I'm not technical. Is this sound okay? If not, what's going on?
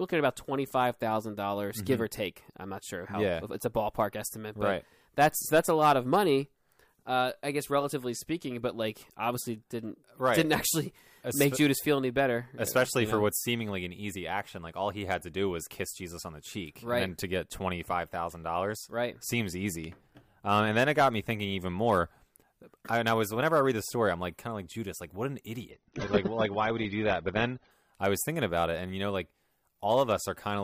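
No. From 25.71 to 27.71 s, just after "like what an", the adaptive stream switched to a lower bitrate because the connection slowed. The sound abruptly turns duller, with nothing above 6.3 kHz and more compression artefacts, without any gap, until it recovers before "I was thinking about".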